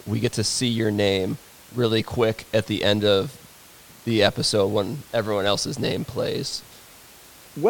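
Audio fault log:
No technical faults can be heard in this speech.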